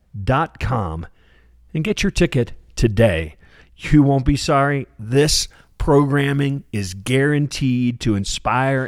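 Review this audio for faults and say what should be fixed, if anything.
From 5.16 to 7.16 s the speech turns thin, bright and sibilant: pre-emphasis left on. The treble lift, which fits the CD 50/15 µs curve, was applied but the matching de-emphasis never followed, leaving 10 kHz about 8 dB above 1 kHz. Unlike a simple loss of bass, the lows keep their level and the brightness rises steadily toward the top. Prevention: confirm the pre-emphasis flag is read and de-emphasis applied during playback or conversion.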